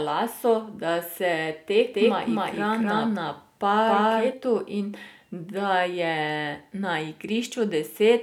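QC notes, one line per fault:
1.93–4.33 s, doubled audio track: a second, likely out-of-step copy mixed in about 0.3 s late at roughly equal level, so the speech repeats as a dry echo, starting and stopping abruptly.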